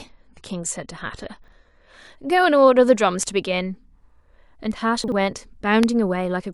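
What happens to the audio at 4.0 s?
Nothing goes wrong at 4.0 s; the speech carries on intact through that moment, with no dropout, click or distortion.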